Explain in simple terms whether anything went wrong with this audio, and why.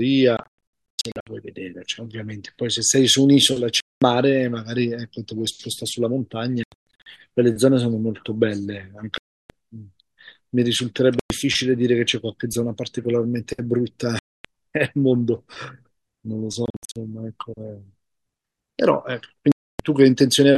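Yes, the speech keeps cutting out in short silent holes at 0.37–1.27 s, 3.80–4.02 s, 6.64–7.06 s, 9.18–9.50 s, 11.19–11.30 s, 14.19–14.45 s, 16.66–16.96 s and 19.52–19.80 s. The first, third and seventh are choppy bursts of several gaps. Each time the sound picks up later, as if it kept going underneath. That's a likely Bluetooth dropout: chunks of audio arrived at the headphones too late and were thrown away.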